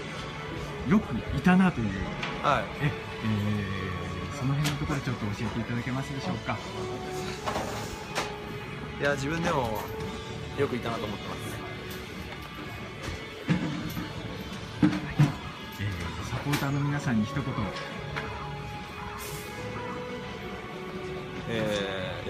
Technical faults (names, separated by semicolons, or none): none